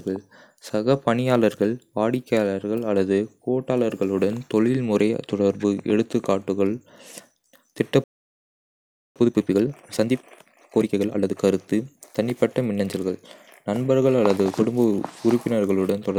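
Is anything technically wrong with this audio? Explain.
Yes, there are two linked problems in this speech clip.

The first is a playback stall from 8.04 to 9.16 s. The speech just cuts out mid-flow and you get about 1.12 s of dead silence before it picks up again. The likely cause is that the player ran dry of buffered data, or its audio thread got blocked for a moment, so there was nothing to send to the output until it recovered.

Right after that, from 9.16 to 11.38 s, there's time-compressed catch-up. To work off the backlog the stall built up, the player snips out small slices and cross-fades the remaining pieces together, running at 1.5 times normal speed. The pitch stays where it should be, but the talking sounds rushed. It settles back to normal pace just before "கருத்து தனிப்பட்ட மின்னஞ்சல்கள் நண்பர்கள்".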